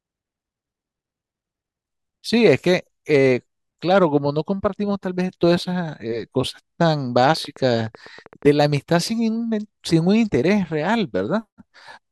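From 7.37 to 8.92 s a train of clicks runs over the speech: around fifteen sharp, similar pulses at about 9 per second, spaced unevenly, each peaking roughly as loud as the voice itself. The likely cause is interference or a faulty connection or power supply repeatedly injecting a short spike. Unlike random crackle, the clicks share one shape and keep a rough rate, and unlike dropouts nothing is removed; they simply tick on top of the sound.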